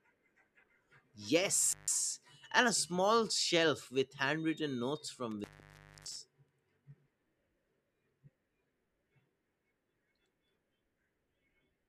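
Intermittent contact cuts the speech twice. At 1.71 to 1.89 s a loose connection in the signal path opens for about 150 ms, and the audio drops out with a crackle as the contact breaks and again as it remakes. After "shelf with handwritten notes", at 5.31 to 6.18 s, a longer opening of about 620 ms silences the line. Faint residual hiss is left until the crackling reconnection brings the speech back.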